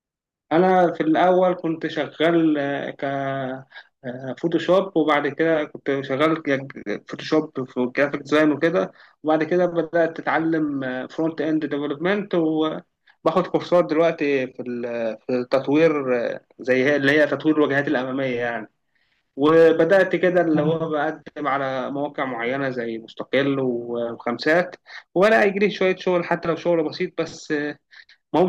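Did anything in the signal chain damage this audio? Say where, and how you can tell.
Yes, there's hard clipping throughout the speech, most likely at the converter or a gain stage ahead of it. The level's driven about 4 dB past full scale, so a small fraction of peaks get sliced flat, and those flat tops add high harmonics you hear as crackle on loud syllables.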